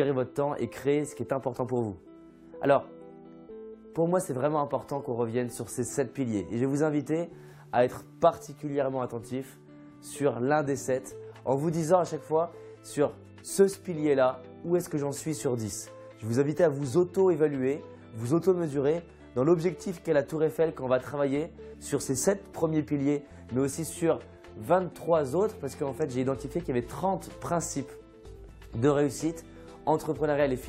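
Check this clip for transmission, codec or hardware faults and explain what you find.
Checking this clip turned up no faults to explain.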